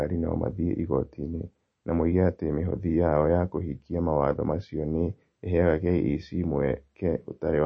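From start to finish the speech carries plainly audible damage, likely from MP3 compression at a low bitrate, consistent with about 32 kbps. Nothing sounds above 8.4 kHz, where the encoder has sheared off the treble to save bits. What separates this from a simple low-pass filter is the watery, swirling texture within the remaining band: weak frequency lines drop in and out between frames, so s sounds chirp metallically and consonant onsets smear.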